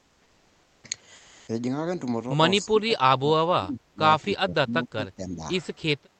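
Right at the start, from 0.00 to 0.83 s and again from 1.15 to 1.47 s, the real background gives way to comfort noise: a flat, featureless hiss, about 1 dB quieter in the first gap and about 3 dB louder in the second. It's likely discontinuous transmission in the Opus codec, filling pauses with synthetic noise.

Then the speech gets suppressed in double talk, from 2.64 to 3.99 s and from 4.27 to 5.42 s. The voice ducks in chunks, by around 25 dB at worst in the first stretch and around 15 dB in the second, likely the echo canceller clamping down while both sides talk. The call path's top end stops near 8 kHz.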